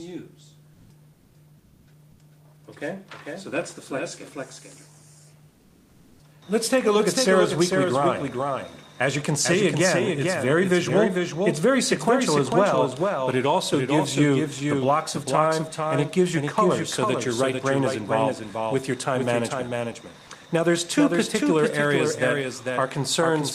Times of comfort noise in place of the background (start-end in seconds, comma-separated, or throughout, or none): 1.13-1.87, 5.49-6.19